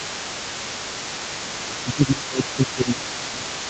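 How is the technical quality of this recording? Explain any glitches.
The recording has two call-related faults, both tied to the far end of a conversation bleeding into the microphone.

Other side's voice leaking through runs across the whole clip, from 0.0 to 3.7 s: a second, fainter voice sits roughly 15 dB below the main talker. Likely cause: a loudspeaker playing the far end, with the echo canceller leaving residue. Unlike crosstalk, it sounds like a loudspeaker picked up in the room.

Speech suppressed in double talk starts at 1.47 s and lasts to the end. While the leaked voice overlaps, the main speech dips by around 10 dB at its deepest. This is likely the echo canceller attenuating everything when it cannot separate the two sides. Unlike a plain level drop, the dips follow the other voice's activity.

The sound stops at 8 kHz throughout, consistent with the Opus call path's wideband limit.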